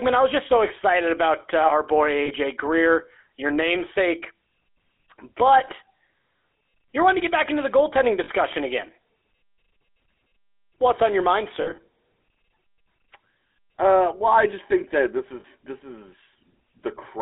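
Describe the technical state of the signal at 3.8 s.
At 3.8 s the speech carries GSM full-rate codec damage, present throughout the clip. The codec rebuilds the voice from a vocal-tract model fed by sparse, evenly spaced pulses, which fits a 13 kbps stream. The band runs from 300 Hz to 3.6 kHz. The result is a plainly audible buzzy, gravelly roughness.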